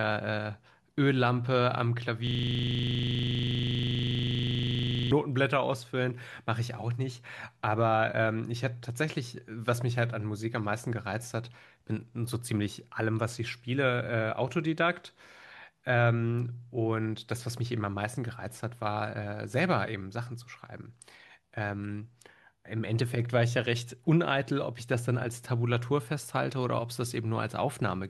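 From 2.27 s to 5.11 s the speech stops and a system hang loop takes over. The system froze while playback kept cycling one 40 ms buffer. That slice repeats about 70 times at 25 Hz, heard as a steady, rough buzz.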